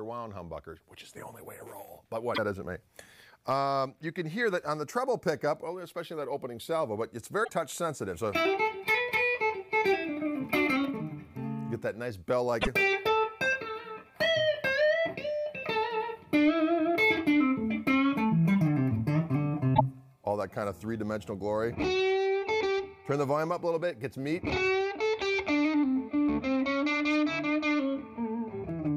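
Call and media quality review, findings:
Damaged data in a compressed stream at 2.31–2.38 s, 7.41–7.50 s, 12.58–12.68 s and 19.71–19.81 s, each about 70–100 ms. Probable component: decoder input, where corrupt frames are misread and the decoder resyncs at the next frame header. It is told apart from simple packet loss by the decoder's misreading of garbled frames rather than a clean gap.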